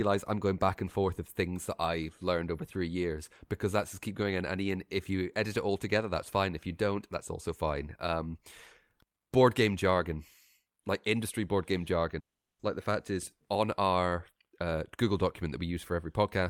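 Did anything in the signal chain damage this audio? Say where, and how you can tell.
Yes, the network stage. From 12.19 to 12.61 s the speech breaks into a fading buzz, then about 380 ms of silence, and resumes with about 400 ms lost. This is likely a long network dropout: concealment stretched the last sound until it gave out. A brief packet loss would be patched without the silent gap.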